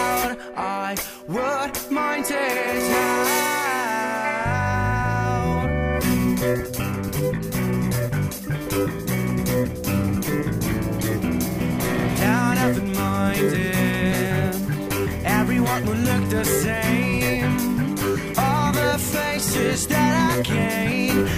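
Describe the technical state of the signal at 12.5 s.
No technical fault is audible at 12.5 s, and the signal is intact at that moment.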